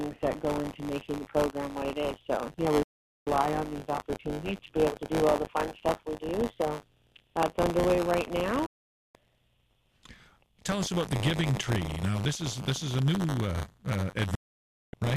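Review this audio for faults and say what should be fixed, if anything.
Buffer tearing runs throughout: writer and hardware pointers cross each period, splicing in roughly 30 ms-old audio. This causes a 100 Hz rattle, visible as vertical striations every 10 ms on the spectrogram. To prevent it, enlarge or realign the playback buffer so the write pointer stays safely ahead of the read pointer.

Digital broadcast dropouts mute the sound at 2.83–3.27 s, 8.66–9.15 s and 14.35–14.94 s, each with an 8 ms fade. The receiver lost frames, leaving flat waveform gaps and blank spectrogram columns. To prevent them, improve reception or signal margin and add error concealment so corrupted frames are repaired rather than muted.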